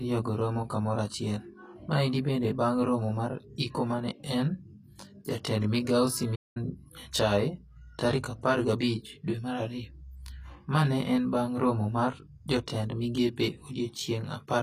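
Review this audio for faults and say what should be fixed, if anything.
Channel delay (comb filtering) runs throughout: one channel lags the other by around 20 ms before the mono sum, so the sound comes out rough or slightly doubled, with notches spaced from around 30 Hz. To prevent it, align the channels before summing.

Plainly audible codec damage also runs throughout, with the treble rebuilt from lower bands so it doesn't match. It's likely HE-AAC compression, at a bitrate around 24 kbps. To prevent it, encode at a higher bitrate.

There's a playback stall right after "jatend migao": the audio drops out from 6.35 to 6.57 s, about 0.2 s, likely while the player is starved of data. To prevent it, give the player a larger buffer.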